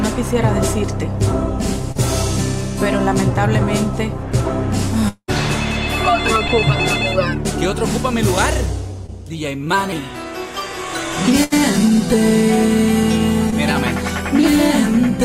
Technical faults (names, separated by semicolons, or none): short concealed packet loss; repeated packet loss (robotic sound); burst of packet loss